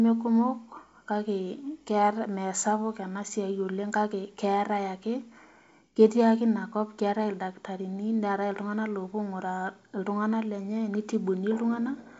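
Nothing here counts as a fault: the speech carries the open, fuller-than-a-phone quality of G.722 wideband telephone coding, with at most a faint trace of its hiss up top, which fits the full 64 kbit/s mode.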